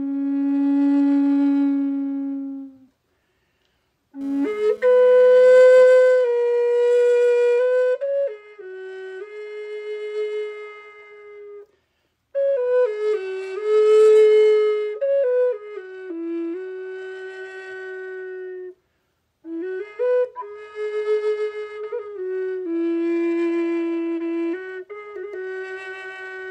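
From 4.21 s to 5.84 s a GSM phone buzz cuts in. It is a hard, raspy tone at about 217 Hz, thick with harmonics. It sits about 27 dB below the sound and has no relation to it. A nearby 2G phone was sending data in bursts 217 times a second. The audio circuit rectified those radio pulses into the signal. The data burst explains why the buzz comes and goes instead of running throughout.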